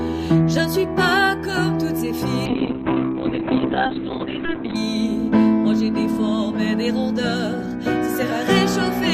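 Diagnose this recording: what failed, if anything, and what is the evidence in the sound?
A call bitrate drop hits from 2.47 s to 4.81 s, a fault in the call processing and codec stage. The bandwidth estimate collapsed, forcing the encoder from 128 kbps down to around 6 kbps, where it sat for about 2.3 s. At that rate the coder quantises far more coarsely and narrows the audio band from 20 kHz to 4 kHz, so the sound turns muffled and rough, with a watery texture, until the bitrate recovers.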